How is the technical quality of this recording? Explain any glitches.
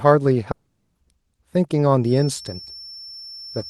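The recording has two clear faults. From 0.51 to 0.97 s the speech breaks into a fading buzz, then silence; a long network dropout likely lost that stretch, which never returns. From 2.0 s to the end, a thin, wavering 5.4 kHz whistle sits well below the speech, likely a feedback whistle from a loudspeaker-to-microphone loop held just short of runaway.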